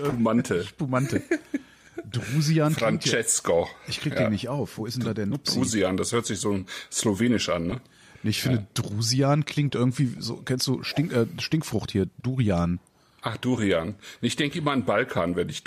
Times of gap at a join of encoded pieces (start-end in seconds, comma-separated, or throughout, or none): none